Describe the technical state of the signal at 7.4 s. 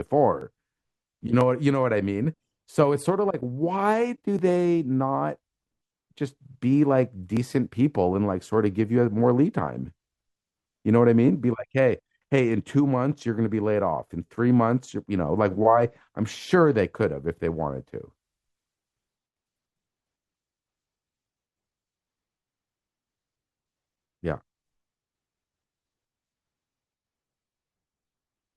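At 7.37 s the speech has an overlap between stream segments. Two segments, which fits a 1-second segmentation, claimed the same few milliseconds, and the player trimmed that stretch from audio that was never duplicated. The waveform jumps forward in a tiny skip. Unlike a dropout, no silence is inserted; a sliver of sound is simply missing.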